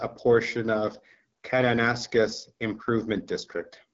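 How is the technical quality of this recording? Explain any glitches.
The recording is held back by low-rate codec damage from start to finish. The speech carries the sound of an AMR wideband (HD Voice) codec at a low setting, and the rough, raspy texture points to a rate around 8.85 kbit/s. The codec rebuilds the voice from a pulse-driven vocal tract model up to 6.4 kHz and fills the band above that with shaped noise. A spectrogram shows nothing above about 7.7 kHz and a smeared, noise-like top band.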